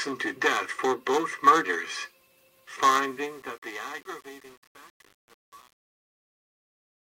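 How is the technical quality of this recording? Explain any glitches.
The recording has one clear flaw, confined to its closing fade.

From 2.82 s to the end at 7.04 s there is truncation distortion on the fade-out. The gain stage discards low-order bits without dither, so as the level drops the waveform collapses onto a few coarse steps, which fits an 8-bit stage. From about 2.89 s onward the tail turns gritty instead of thinning out cleanly.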